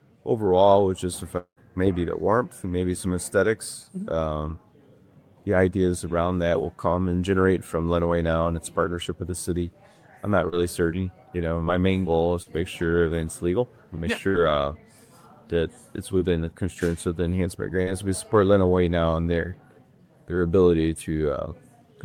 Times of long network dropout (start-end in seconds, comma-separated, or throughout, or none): 1.37-1.59